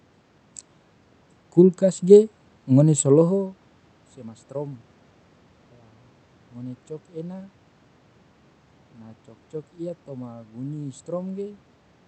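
No system faults: the room noise belongs to the recording, the level shift around 3 s is the talker moving relative to the microphone, and the Opus call path at 64 kbps, with audio bandwidth limited to 8 kHz, shows only its ordinary coding character.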